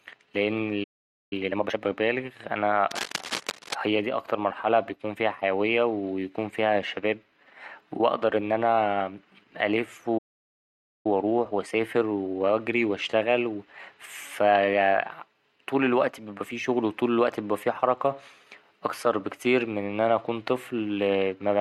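At 0.83 s the player most likely ran out of buffered data or had its thread blocked, and this playback stall leaves the speech cut off mid-flow in silence for about 0.48 s. It resumes at 1.33 s. From 1.33 to 1.79 s a time-compressed catch-up follows. The player trims its backlog by removing short slices and cross-fading across the joins, so the speech runs at twice its normal pace while its pitch stays the same.

From 2.91 to 3.74 s, cable scratch noise sits over the speech. This is likely a worn cable, connector or control being moved, so that its contact resistance flickers rapidly. The result is dense, irregular bursts of scratchy rustling about 10 dB below the speech for just under a second.

A second playback stall starts at 10.18 s, again likely from a data underrun or a blocked playback thread. The output drops to silence for about 0.87 s before picking up at 11.06 s. The catch-up that follows is gentler and longer. 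From 11.06 to 14.06 s the player squeezes out its backlog at 1.1 times normal speed, so the speech sounds slightly rushed, with unchanged pitch.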